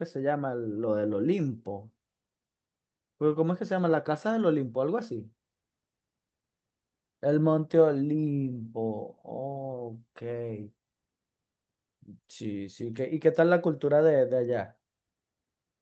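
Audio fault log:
Nothing to log here; the speech comes through a call path as it normally would, with the top end stopping around 8 kHz, which fits a call codec running at its usual wideband setting.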